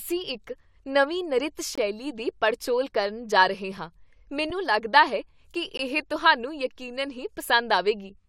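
Speech clip with gaps between stream segments: hard-edged silent holes at 1.75–1.78 s, 3.77 s and 5.77 s, adding about 23, 4 and 18 ms, spaced two seconds apart at segment boundaries. Unlike a dropout, nothing is lost; the speech resumes exactly where it stopped.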